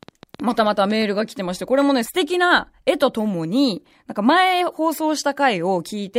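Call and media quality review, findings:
Train of clicks, 0.03 to 1.03 s: around ten similar-shaped ticks at about 10.1 per second, irregularly spaced, peaking roughly 5 dB above the speech. Likely nearby equipment interference or a faulty connection or power supply injecting pulses. The repeated similar shape, continuing into gaps, separates it from a single pop or codec crackle.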